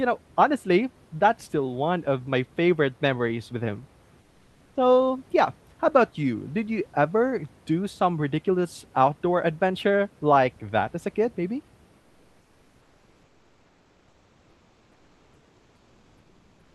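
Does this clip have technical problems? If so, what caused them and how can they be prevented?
Yes. Comfort noise replaces the background at 4.21–4.75 s, after "favorite memories with him", and from 11.99 s onward, after "as a kid maybe". The room tone turns flat and about 3–4 dB quieter, likely from discontinuous transmission filling the pauses. Turning off DTX in the Opus encoder settings keeps the real background flowing through silences.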